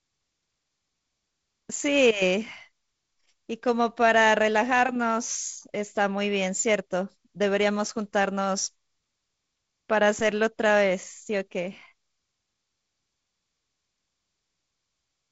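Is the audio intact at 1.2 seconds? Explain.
Yes, the audio is intact at 1.2 seconds, with the speech carried cleanly through G.722 wideband telephone coding and no fault at that moment.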